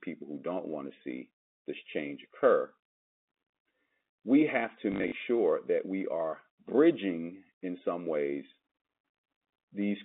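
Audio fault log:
4.92–5.12 s, packet loss with last packet repeated: 120 ms lost in bursts up to 40 ms, each refilled with repeats, so it buzzes rather than dropping silent.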